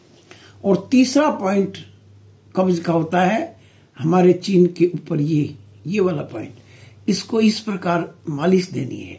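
Nothing technical stands out here; the audio runs along without any dropouts, glitches or other problems to point to.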